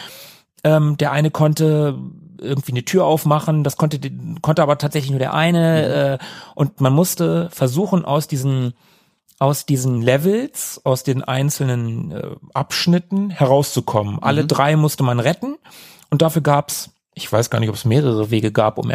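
At 4.87 to 6.14 s and again at 8.41 to 9.97 s, the speech jumps about 6.3% faster. Its pitch rises 105 cents, roughly a semitone. Then it snaps back. At 12.24 to 14.18 s and 17.30 to 17.94 s, it slows by the same amount and drops 112 cents. Each is a drift correction step, likely from clock-matching software resampling in one jump to refill or drain its buffer. The voice sounds briefly detuned.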